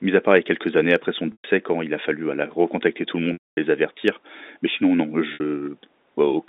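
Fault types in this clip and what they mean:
Packet loss with pitch repetition: audio went missing for 120 ms at 1.32 s, 240 ms at 3.33 s and 60 ms at 5.34 s, and the receiver filled each gap by looping the last pitch cycle while fading it over about 50 ms. The brief gap sounds like a held buzz. The longer ones decay into silence before sound cross-fades back. The waveform shows identical repeating cycles shrinking to a flat line, and the spectrogram shows frozen, evenly spaced harmonic stripes.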